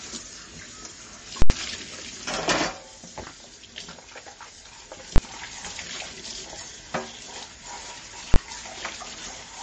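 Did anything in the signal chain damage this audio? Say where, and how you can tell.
Yes. The whole clip is band-limited and watery, which points to the codec stage. Nothing survives above 8.3 kHz, and the upper detail swirls as weak components drop in and out from frame to frame. Transients sound smeared rather than crisp. That is the signature of MP3 compression, likely at a bitrate around 32 kbps. A plain low-pass filter would cut the treble cleanly but would not produce this shifting, metallic texture.

The second fault is invalid numbers at full scale, from a calculation in the processing or sample-format conversion stage. From 1.42 to 1.50 s there is a very loud pop at each end of an 80 ms block with nothing audible between them. The output is pinned at one extreme value there, not silent. The 20 ms blocks at 5.16 to 5.18 s and 8.34 to 8.36 s are too short to separate and land as single bangs. 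A dropout would be quiet rather than loud, and ordinary clipping would follow the waveform instead of jumping to full scale.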